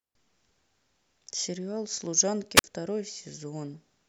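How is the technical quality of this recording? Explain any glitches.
The recording has one glitch, a wireless microphone squelch dropout from 2.56 to 2.64 s. The FM radio link faded and the receiver's squelch shut the output, so the speech breaks into a short burst of hiss, then about 50 ms of near silence, before resuming.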